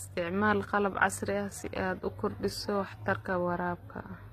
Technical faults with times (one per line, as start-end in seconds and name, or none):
0.00-4.32 transcoding between lossy codecs